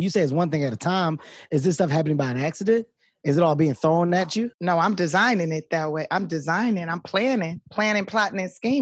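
A speech recording with no technical faults. Nothing is heard above about 8 kHz and the lowest bass is trimmed, as expected from the call microphone processing and the Opus-coded WebRTC call path it came through.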